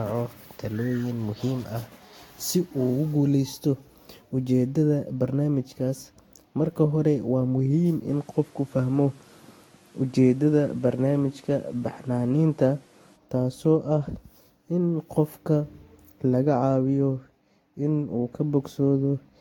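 Swirly, smeared and hollow throughout, with blurred attacks, the speech carries generation loss: it was likely decoded and re-encoded about five times with Vorbis at 62 to 65 kbit/s, each pass re-quantising on a shifted frame grid and compounding noise and spectral holes, with nothing above 19.3 kHz. From 8.09 to 13.16 s the sound turns duller, losing everything above 13 kHz and gaining a new noise floor about 35 dB below the speech, with no gap or level jump at either edge. The input was likely switched to a poorer device for that stretch and then back.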